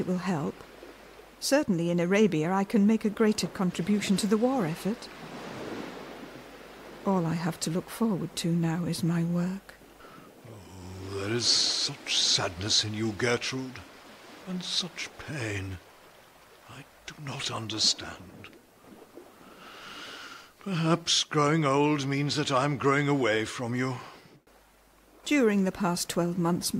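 No technical faults can be heard anywhere in this audio.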